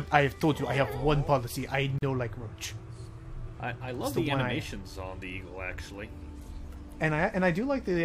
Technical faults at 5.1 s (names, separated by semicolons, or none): none